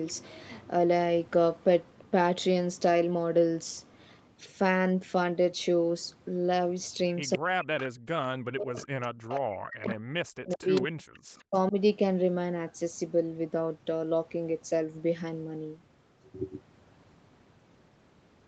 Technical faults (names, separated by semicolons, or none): echo leak; speech suppressed in double talk